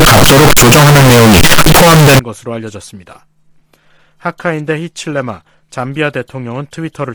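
From 0 to 2.19 s the audio is a loud, harsh, nearly square waveform sitting at an almost fixed, high level, with background noise as loud as the main sound. Pitch remains traceable. This is float read as integer, likely 32-bit float samples decoded as 32-bit integers.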